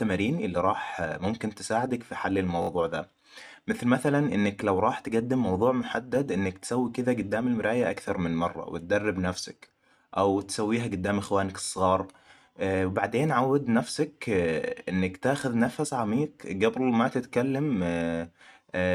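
A speech clip with two repeated buffer stutters: 2.62 to 2.69 s, where one piece of about 21 ms plays four times, and 11.65 to 11.69 s, where it plays three times. The output device ran short of fresh audio and replayed its last block, a length that fits a 1024-sample buffer. No audio appears lost. On a waveform, identical short segments sit side by side with abrupt joins. A spectrogram shows thin vertical lines at each join, about 21 ms apart.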